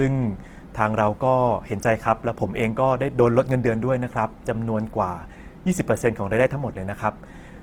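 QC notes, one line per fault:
throughout, Opus compression: the speech was likely squeezed through the Opus codec in its music (CELT) mode at a low rate, which fits about 16 kbps. With too few bits, the encoder keeps each band's overall energy but fills in the fine detail by copying lower bands or substituting noise. Tones in the voice therefore turn rough, noisy and grainy. The bandwidth stays full, reaching 20.3 kHz, so the damage is texture rather than dullness.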